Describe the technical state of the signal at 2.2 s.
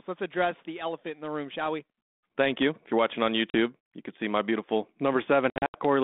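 At 2.2 s the speech is intact, with no fault at that moment beyond the narrow telephone band of the G.726 ADPCM path it travels through.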